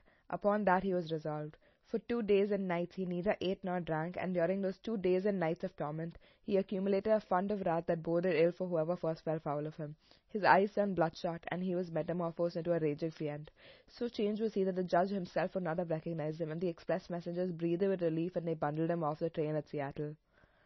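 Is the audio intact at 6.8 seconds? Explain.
No, not really. Like the rest of the clip, the speech at 6.8 seconds is band-limited and smeared, with nothing above about 5.9 kHz, and it has that watery, swirling texture on the s sounds. That's likely heavy MP3 compression. Starved of bits, the encoder chops off the treble at a fixed point and lets weak frequency lines flicker in and out between frames. The damage fits a low bitrate around 24 kbps.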